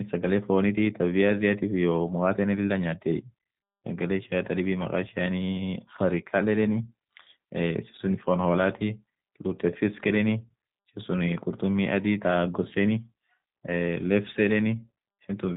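Throughout, the speech passes through a G.729 codec, likely at about 8 kbit/s, rebuilt from a tract filter and sparse pulses, so it sounds rough, synthetic and dull above 3.8 kHz.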